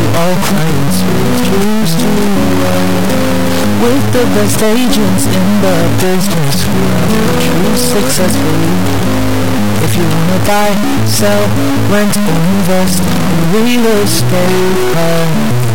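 From start to finish, the audio carries a harsh, buzzy distortion, and even the pauses are filled with loud noise rather than silence. This is most likely a stuck bit, with one high-order data bit fixed regardless of the signal. Its step is only a few decibels below full scale, so about half the samples jump by a large offset. A waveform shows abrupt square-edged displacements, and a spectrogram shows broadband smearing across all frequencies, including the gaps.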